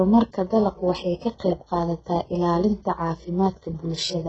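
A short speech recording that carries heavy HE-AAC compression damage from start to finish. Nothing reaches above 8 kHz, and the treble that does exist sounds synthetic rather than captured. That is the signature of spectral band replication: the coder keeps only the lower band and fills the upper range with shifted copies under a coarse envelope. As a result, s sounds come out gritty and lispy. The depth of the damage fits a very low rate, around 8 kbps, with HE-AAC the likely cause.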